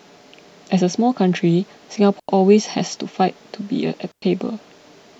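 A speech recording with two digital wireless dropouts, at 2.20 s (about 92 ms) and 4.12 s (about 106 ms), where the receiver lost data and muted cleanly, leaving near-silent holes without noise bursts.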